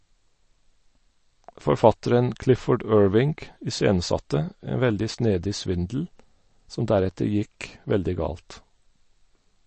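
A speech recording with MP3 compression throughout: nothing above 8.3 kHz, plus watery, swirling artefacts from weak frequency lines flickering, likely from a low bitrate near 34 kbps, unlike plain low-pass filtering.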